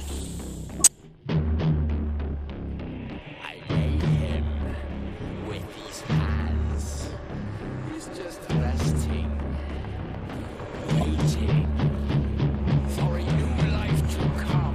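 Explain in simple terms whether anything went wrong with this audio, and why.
Two brief chirpy bursts of noise break into the sound: a longer one from 0.71 to 0.92 s, and a quick blip from 11.01 to 11.03 s. These are corrupt frames being decoded. The audio is stored in small compressed chunks, and a few of them were damaged. The player decoded them anyway, so energy landed at the wrong pitches. The first burst sounds like several chunks in a row went bad, the second like only a couple.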